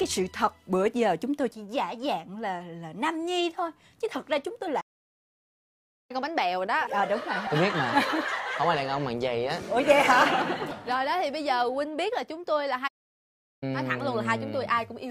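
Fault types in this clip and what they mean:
Playback stall: the sound drops to silence mid-flow for 1.29 s at 4.80 s and 0.74 s at 12.87 s, likely the player running out of data.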